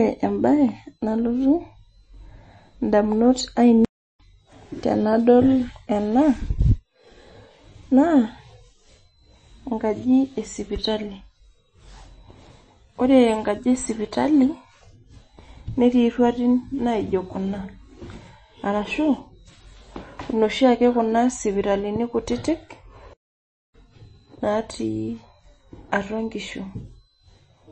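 From start to finish the speech carries MP3 compression damage, and it's plainly audible. Nothing gets through above 8.3 kHz, so the top end sounds dull and s sounds lose their edge. The weak detail flickers in and out and leaves a watery, swirly texture. That's what happens when the encoder runs short of bits and starts dropping content, which fits a low bitrate somewhere around 32 kbps.

Then there are two playback stalls. At 3.85 s the sound cuts out mid-flow for about 0.35 s and comes back at 4.20 s. The second is longer. Right after "kuna sipitalini kutitik", at 23.13 s, it goes silent for about 0.61 s and resumes at 23.74 s. Both gaps sound like the player likely ran dry of data, or got blocked, and had to wait before carrying on.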